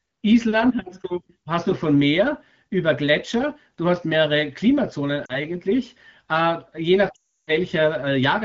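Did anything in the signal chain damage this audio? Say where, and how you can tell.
Yes. The damage comes from lost AMR speech frames on the radio link, ahead of the AMR wideband (HD Voice) decoder, which itself sounds lightly coded. At 5.25 to 5.36 s there is a brief drop toward near silence. That fits about two bad frames, roughly 40 ms of audio. At 7.16 to 7.51 s a longer gap drops to near silence within two frames. That fits a run of about 320 ms. The decoder repeated its last good settings with falling gain.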